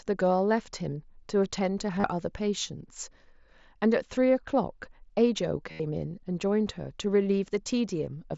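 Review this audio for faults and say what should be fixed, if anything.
Concealed Bluetooth headset packet loss occurs twice: voice packets between the headset and the phone were lost, and the receiver filled each gap by repeating the best-matching stretch of the preceding waveform. At 1.96 to 2.04 s about 45 ms is lost across a 75 ms span, with the longest run 30 ms, so a short buzzy hold slips through. At 5.71 to 5.80 s a loss of about 83 ms becomes a sustained full-level buzz with a warble as real speech resumes. The mSBC link itself carries the speech with only light graininess. To prevent it, keep the headset close to the phone with a clear line of sight and reduce 2.4 GHz interference from Wi-Fi and other radios.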